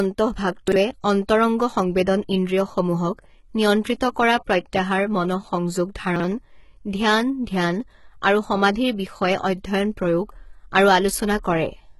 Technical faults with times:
0.00-11.99 HE-AAC compression
0.68-0.76 chunks out of order
6.16-6.24 chunks out of order

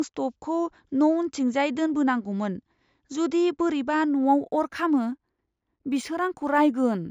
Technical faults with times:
4.08-7.11 imaging from linear upsampling

